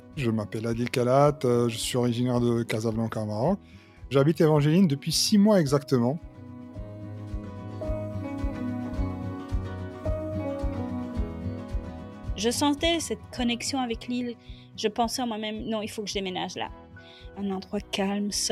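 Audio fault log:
No audible faults detected.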